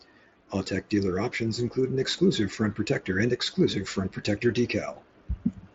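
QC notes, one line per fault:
Nothing to flag; no faults heard in this speech.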